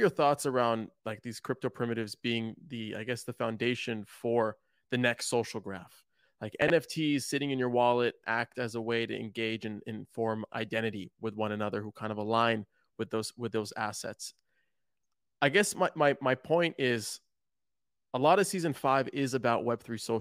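A speech recording with chunks out of order at two points. From 6.62 to 6.70 s, a short piece of audio plays late, after material that should follow it. The moment sounds jumbled. The 80 ms span fits a 20 ms chunk arriving about three chunks late. At 17.84 to 17.88 s the same fault recurs, shorter, fitting a single chunk one place late. No audio is lost. Only the order is wrong.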